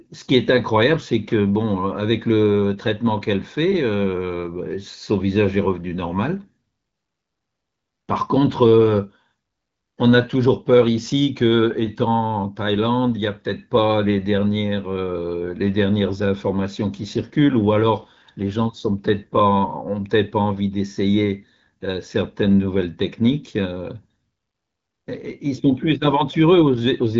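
No faults are audible.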